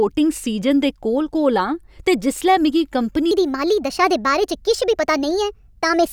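It's a speech clip, and right after "ते जिसलै मिगी कंपनी", at 3.31 s, a section at the wrong speed runs to the end: it plays 1.29 times too fast, so the voice jumps roughly four semitones higher and sounds hurried, likely from that stretch being fitted to the wrong clock.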